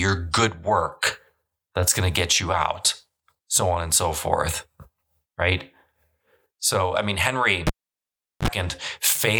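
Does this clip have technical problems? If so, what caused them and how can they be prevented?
Yes. After "I mean", a cable is pulled and plugged in while live: a pop at 7.67 s, 0.76 s of near silence, a 48 ms 50 Hz mains buzz as the plug tip makes contact, then a second pop at 8.48 s. Mute the channel before unplugging or reconnecting cables.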